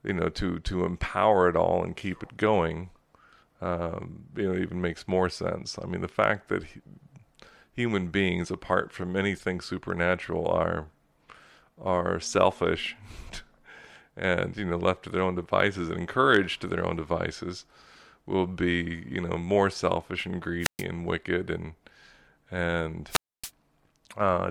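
Speech, interrupted twice by wireless microphone squelch dropout, first at 20.6 to 20.84 s, between "know more selfish and" and "and wicked and", then at 23.09 to 23.51 s. Each time the FM radio link weakens, hiss swells, and the receiver's squelch mutes the output for about 126 ms and then 272 ms. On a waveform these are flat, near-zero gaps. A spectrogram shows a brief broadband noise smear before each dark, empty vertical band.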